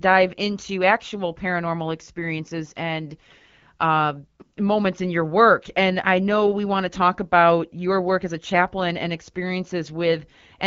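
No faults to report: the AMR wideband (HD Voice) path runs at 12.65 kbit/s, coding the speech band up to 6.4 kHz and filling the top of the band with shaped noise, as expected at that rate.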